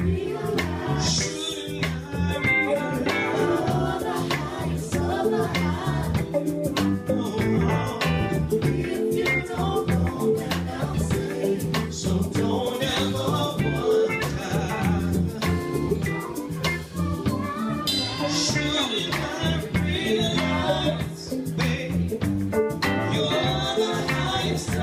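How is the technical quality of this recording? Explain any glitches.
No glitches can be heard in this recording, with no dropouts, clicks, distortion or timing faults anywhere.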